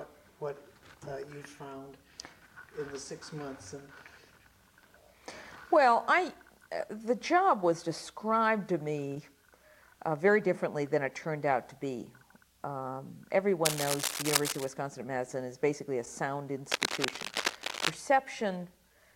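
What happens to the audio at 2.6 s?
Nothing goes wrong at 2.6 s; the audio plays through that moment intact, with no dropout, click or other fault.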